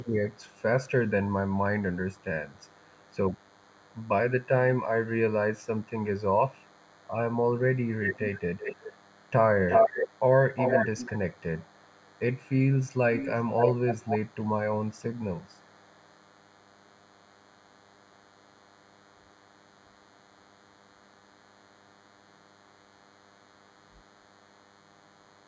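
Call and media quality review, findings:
DECT cordless phone buzz, throughout: thin, steady 100 Hz buzz with many harmonics, well below the speech. A nearby DECT unit bursts every 10 ms and the audio circuit rectifies it.

Echo leak at 0.0–1.1, 2.1–4.08, 6.54–7.07, 7.74–9.31, 9.67–10.19 and 10.54 s onward: a delayed voice copy at 460, 365, then 525 ms. It is faint but loud from 7.74 to 10.19 s. Likely an under-cancelled far-end loudspeaker.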